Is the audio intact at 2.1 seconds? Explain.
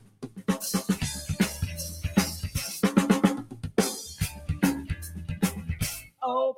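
No, at 2.1 s a speech noise suppressor is working on the music throughout, treating held notes and tails as noise and ducking them by around 15 dB, so it pumps.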